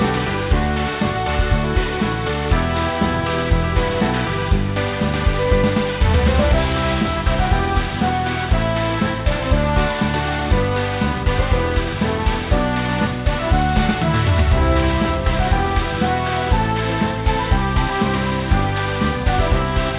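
Aliasing runs throughout: downsampling without an anti-alias filter, apparently to about 8 kHz, folds content above 4 kHz back down, leaving gritty, metallic false tones roughly 15 dB below the signal.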